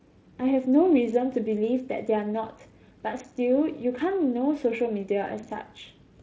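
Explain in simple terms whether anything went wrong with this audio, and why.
Nothing went wrong with this audio, so there is no problem here to explain.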